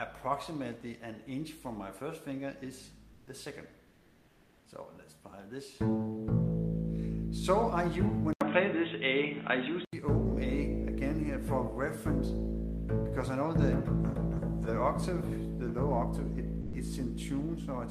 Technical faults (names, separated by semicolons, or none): comfort noise in place of the background; input switched to a poorer device; sound dropped by the voice detector